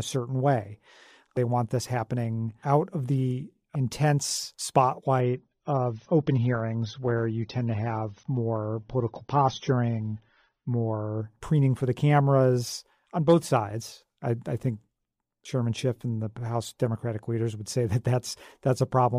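Speech, with one stretch of reduced quality from 5.21 s to 11.21 s, caused by an adaptive stream at a lower bitrate. For those six seconds the top end disappears, with nothing above about 6.3 kHz, and the sound takes on the smeared character of a heavily compressed AAC stream. Both transitions are abrupt and gapless, which points to the player switching down to a low-bitrate rendition, on the order of 24 kbit/s, when throughput fell, then switching back.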